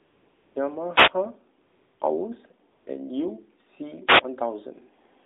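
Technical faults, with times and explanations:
0.00–0.56 s, 1.62–2.00 s, 2.72–2.86 s: AMR comfort noise. No speech frames were sent in these pauses, so the real background is replaced by smooth synthetic noise that switches in and out abruptly.
0.91–1.13 s, 4.06–4.22 s: wireless microphone noise hit. The analogue FM radio link fades as reflections cancel, and rising receiver noise produces a short swish of static.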